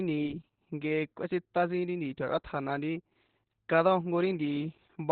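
From start to finish the speech sounds muffled, hoarse and faintly robotic, with nothing above about 4.5 kHz. This is heavy Opus voice compression: the coder's linear-prediction voice mode has narrowed the band and coded the excitation coarsely, which fits a bitrate near 8 kbps.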